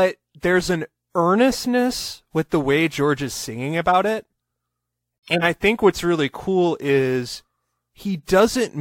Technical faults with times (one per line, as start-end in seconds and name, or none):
3.89-3.95 corrupt frame decoded
5.26-5.44 corrupt frame muted